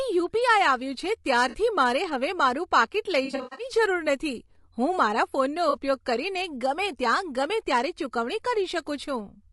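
Running through the whole clip is a coarse low-delay encoding, likely low-delay AAC (AAC-ELD) at a bitrate that sounds around 32 kbps. At this low bitrate it cannot code the pitch harmonics cleanly, so noise fills the gaps between them and the speech comes out rough and grainy, with a thin, somewhat synthetic top end.

AAC frame loss with concealment occurs three times. At 1.49 to 1.56 s, about 40 ms of data went missing, which fits a couple of lost frames. The decoder patched the gap from the last good spectrum, leaving a brief smeared, noisy blip. From 3.25 to 3.65 s, the losses are scattered across roughly a third of a second, with the longest gap around a tenth of a second. That stretch turns phasey and washed out. At 5.69 to 5.77 s, another loss of about 40 ms produces a second short smear.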